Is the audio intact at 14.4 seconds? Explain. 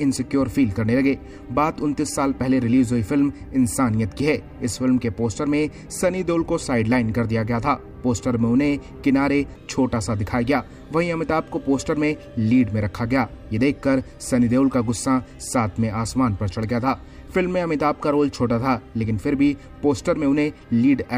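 Yes, the audio at 14.4 seconds is intact, with no dropout, click, distortion or other fault at that moment.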